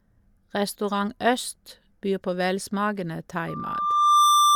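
Loudspeaker feedback squeal starts at 3.48 s in this speech recording and runs to the end at 4.56 s. A single tone at 1.2 kHz swells over roughly the first 0.7 s and settles about 10 dB above the speech. The microphone is picking up the loudspeaker it drives, and at 1.2 kHz the loop gain has crossed one, so that frequency feeds on itself and keeps growing. Nothing breaks the loop before the end.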